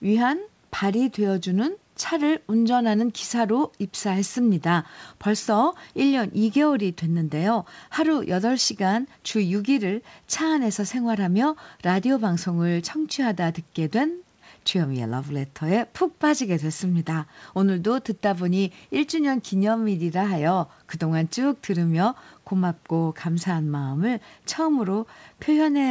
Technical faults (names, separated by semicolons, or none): none